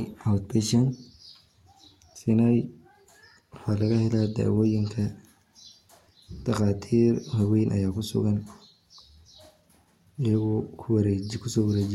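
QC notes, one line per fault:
No technical faults are audible anywhere in the speech signal.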